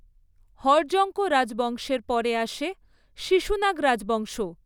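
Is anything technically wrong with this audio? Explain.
No, nothing technically wrong can be heard in this speech recording. There is no moment in it where a fault shows up.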